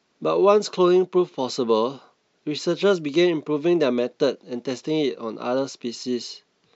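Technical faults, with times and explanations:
No technical faults are present in this speech recording.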